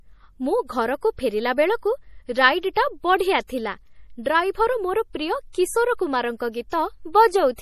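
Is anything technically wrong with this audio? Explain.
Yes. Throughout the speech there is a watery, swirly quality and metallic chirps on s sounds, likely from MP3 compression at a low bitrate around 40 kbps. A spectrogram shows a hard ceiling at 14.9 kHz and weak components flickering on and off between frames.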